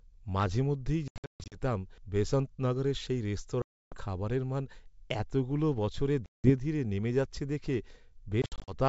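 Packet loss on an ADPCM call hits the speech at 1.08–1.58 s, 3.62–3.98 s, 6.26–6.51 s and 8.42–8.75 s as hard-edged silent gaps, the first and last scattered. The decoder's predictor and step size lose track, so speech resumes slightly distorted before settling.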